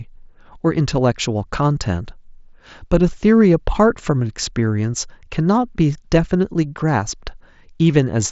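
No technical faults can be heard in this speech.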